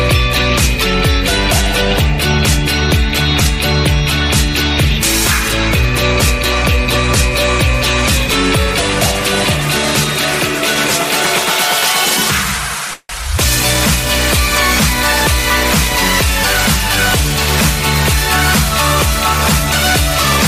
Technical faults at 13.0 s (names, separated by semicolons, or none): call audio freeze